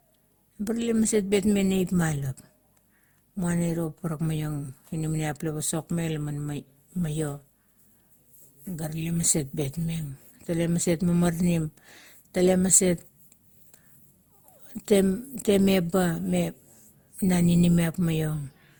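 Speech, and across the whole clip it carries generation loss: the sound is swirly, smeared and hollow, with consonant onsets blurred, more degraded than a single pass at a moderate bitrate would leave. The likely cause is repeated lossy re-encoding, around seven passes, with a character that fits Opus near 64 kbit/s, each pass quantising on a shifted frame grid. A spectrogram would show a speckled texture, with nothing above 20.3 kHz.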